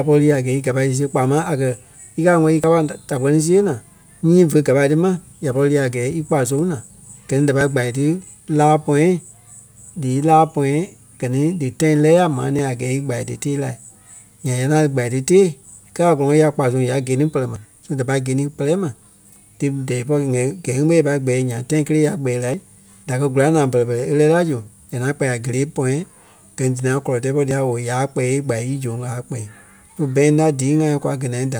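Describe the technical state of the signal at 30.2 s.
At 30.2 s the speech signal is intact, with no audible technical fault.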